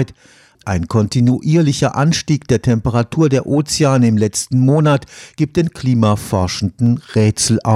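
At 1.73 s and again at 6.86 s there's a single sharp click in the speech, each one a thin vertical line straight up the spectrogram. Both are most likely dropped samples: a fraction of a millisecond went missing from the stream, so the waveform jumps from one value to a later one. That's far too little to remove any sound, so all you hear is the step itself as a click.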